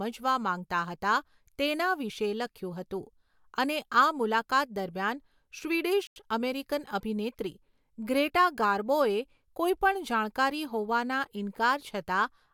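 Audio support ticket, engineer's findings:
Speech cut to silence 6.07–6.16 s, about 91 ms, then resumes; likely Bluetooth stall, receiver buffer ran dry awaiting resent packets. Clean gap, no glitch or smearing.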